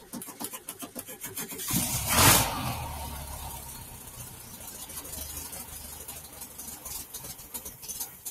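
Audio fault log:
throughout: noise suppressor applied to music or sounds. A speech-tuned suppressor stays engaged and keeps treating steady, sustained parts of the sound as noise, so its gain swings by around 10 dB. Onsets pass while held portions and tails dip, giving audible pumping and a thinned texture.
3.96–4.13 s, 4.31–4.57 s, 6.24–6.58 s: sound cut by the noise suppressor. In each window the suppressor misreads the sound as noise and pulls it down by about 5 dB more than its surroundings. Sustained or decaying material sinks briefly, so these moments sound hollowed out and clipped short.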